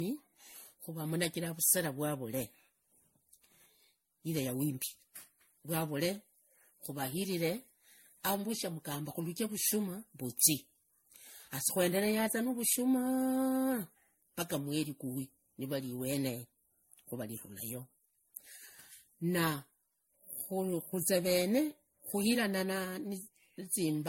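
A speech clip with generation loss throughout. It sounds swirly, hollow and smeared, with blurred attacks and nothing above 16.5 kHz. Likely cause: repeated lossy re-encoding, roughly seven passes, fitting 64 kbit/s MP3.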